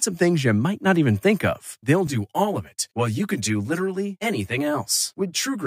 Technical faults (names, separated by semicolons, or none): channel delay (comb filtering)